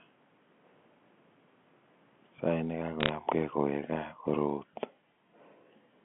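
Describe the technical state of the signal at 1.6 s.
At 1.6 s the speech comes through intact, with nothing faulty at that moment.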